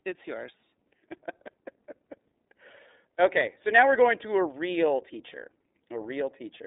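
From start to finish the speech carries iLBC codec damage, and it is plainly audible. The sound is confined to a telephone line band of roughly 250 Hz to 3.7 kHz, with nothing above 3.8 kHz, so on a spectrogram the energy stops at a sharp ceiling with empty space above. Each frame's excitation is coded independently, which fits 30 ms frames and the 13.33 kbps mode. The voice sounds rough and slightly synthetic.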